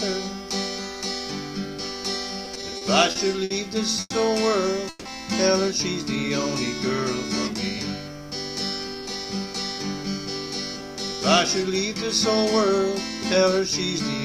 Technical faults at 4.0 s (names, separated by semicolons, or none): call audio freeze